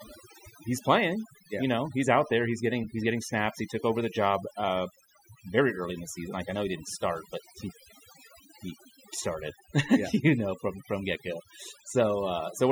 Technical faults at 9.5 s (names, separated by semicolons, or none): overdone noise removal